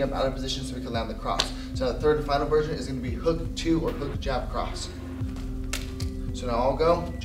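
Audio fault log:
No faults were found in this audio. There is nothing to log for any point in the clip.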